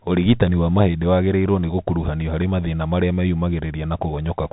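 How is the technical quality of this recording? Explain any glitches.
Quality is poor throughout. The speech runs through a Bluetooth CVSD headset codec, which fits a 64 kbps link. Narrowband filtering caps bandwidth near 3.8 kHz, and one-bit delta steps scratch sibilants and leave granular hiss.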